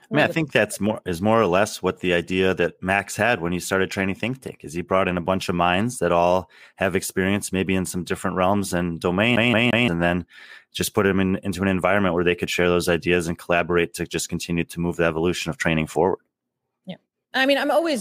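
At 9.36 s the speech locks into a CD stuck on one turn until 9.88 s. A roughly 174 ms slice plays three times, each pass ending in a brief mute where the laser jumps back a track, giving the quick, even stutter of a skipping disc.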